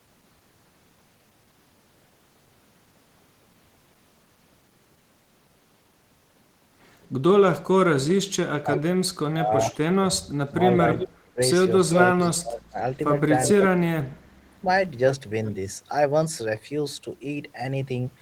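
From 8.08 to 8.8 s there is an echo leak: a faint repeat of the speech trails it by 350 ms, about 10 dB quieter. The likely cause is a loudspeaker-side echo canceller that let part of its microphone pickup return down the line. On a spectrogram it shows as a ghost of the harmonic pattern, shifted right and dimmer. On the waveform it is a low-amplitude copy filling gaps after each burst.

Overlapping that, from 8.53 to 14.39 s, is speech suppressed in double talk. In scattered pieces adding up to roughly two seconds, the speech dips sharply, at deepest by roughly 30 dB, and sometimes drops out entirely. This is likely an echo canceller mistaking the talker for echo while both sides spoke and turning everything down. The waveform shows sudden envelope collapses, and the spectrogram shows dark vertical gaps.

A second echo leak runs from 10.94 to 12.29 s, this time with a 360 ms delay and again about 10 dB below the speech. 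It likely has the same cause, residual echo passed back uncancelled. It is heard as a longer shadow of the speech and looks like a faint, offset duplicate of the spectral pattern.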